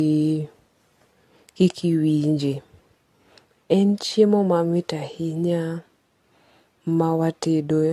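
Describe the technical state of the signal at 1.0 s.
At 1.0 s the speech sounds swirly, smeared and hollow, as it does throughout, with blurred attacks. This is likely generation loss from repeated lossy re-encoding, consistent with several passes through AAC at around 64 kbit/s.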